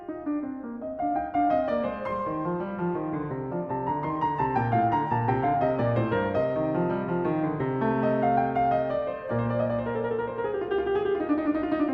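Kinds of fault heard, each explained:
Call bitrate drop: From 0.65 s to about 2.45 s the music turns rough, watery and duller, then regains its clarity. The call's bandwidth estimate fell, and the encoder was told to work with far fewer bits, going from 96 kbps down to 28 kbps and staying at that low rate for about 1.7 s. With so few bits the Opus encoder codes the music more coarsely and trims the high frequencies until the bitrate recovers.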